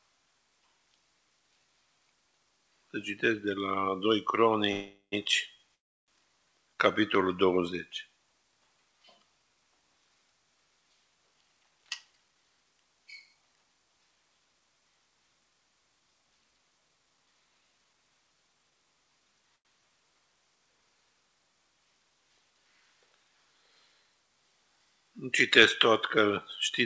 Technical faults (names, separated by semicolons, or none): call audio freeze; jitter buffer speed-up; short stall from a late packet